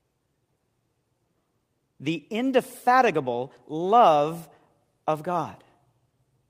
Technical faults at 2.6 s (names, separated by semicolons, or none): none